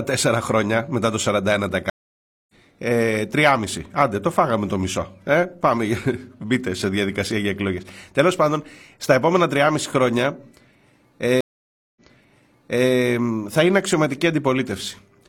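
At 1.90 s a stream reconnect cuts the speech for 590 ms, resuming about 0.7 s further on. At 11.41 s another leaves 555 ms of silence, then jumps back 0.94 s and repeats material. Unlike a plain dropout, the audio doesn't resume where it stopped, because a fresh decoder restarts mid-stream.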